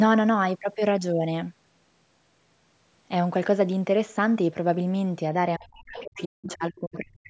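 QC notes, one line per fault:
5.58–7.30 s, speech suppressed in double talk: the talker's level dips and breaks into pieces through to the end, falling by roughly 40 dB at its deepest. Both sides likely spoke at once, so the echo canceller muted the talker along with the echo.
5.97–6.25 s and 6.48–6.54 s, other side's voice leaking through: a fainter second voice sits about 20 dB below the talker in two short scraps. It is likely loudspeaker playback picked up by the microphone that the echo canceller failed to fully remove.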